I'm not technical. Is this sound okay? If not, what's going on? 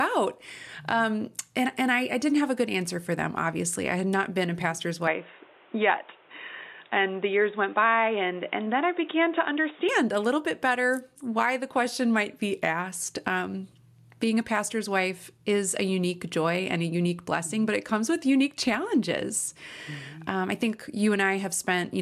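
No. From about 5.07 to 9.89 seconds, the sound suddenly turns dull and boxy. The crisp high end disappears, with nothing left above about 3.8 kHz. A faint new background noise also comes in. The loudness stays about the same, and there is no gap at either change. This is likely an input switched to a poorer device, such as another microphone or a headset in call mode. At 9.89 seconds the clearer sound returns.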